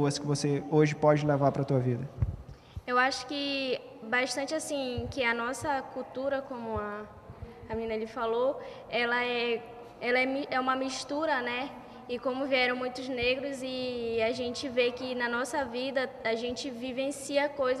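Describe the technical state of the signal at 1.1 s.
No fault can be heard at 1.1 s, and the signal is intact at that point.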